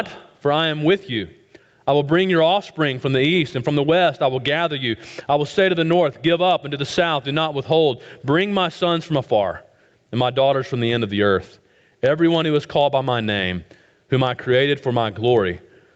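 Gain pumping runs through the whole clip, a swing of around 15 dB, likely from excessive input gain driving a fast limiter. On a waveform this looks like a flattened, squashed envelope. In a spectrogram, the noise floor brightens between loud events. Content stops at about 8 kHz, consistent with a wideband call path.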